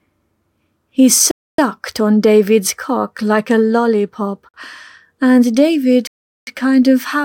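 At 1.31 to 1.58 s, 4.49 to 4.54 s and 6.07 to 6.47 s the speech drops to clean digital silence for 0.27 s, 51 ms and 0.4 s, a likely Bluetooth stall as the headphone buffer ran dry awaiting resent packets. Unlike codec packet-loss concealment, nothing is smeared or warbled.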